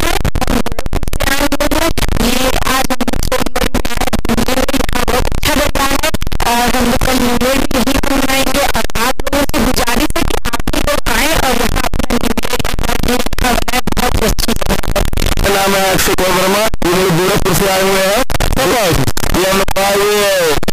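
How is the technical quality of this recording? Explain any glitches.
The technical quality is poor: the whole recording is wrecked by what sounds like signed and unsigned mixed up. From start to finish the audio is a wall of harsh, overloaded distortion, and the quiet stretches come through just as loud as everything else. That's likely 16-bit signed samples being read as unsigned, or the reverse. Flipping the top bit makes every pass through zero leap across the full range, so even near-silence turns into loud grinding.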